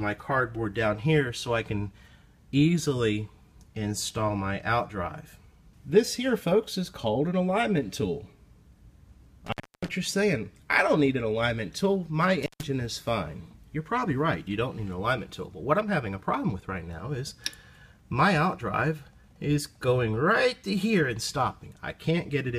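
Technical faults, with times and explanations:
9.46–9.88 s and 12.43–12.63 s, intermittent contact: a loose cable or plug briefly lost its connection twice, breaking the signal path for about 0.30 s and then about 0.14 s. Each break cuts the sound out abruptly, with crackle where the contact scrapes open and again where it reseats. Faint hiss remains during the gap, because nothing from the source reaches the input while the line is open.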